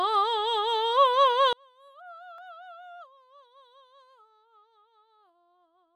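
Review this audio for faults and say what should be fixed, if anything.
From 1.53 s to the end, the music drops by about 37 dB to a faint remnant, with nearly everything common to both channels gone. The cause is likely one channel inverted: with one side's polarity reversed, the material common to both channels cancels when they sum to mono, leaving only the faint difference between them. Check the polarity of each channel and flip the inverted one back before summing or bouncing the stereo pair.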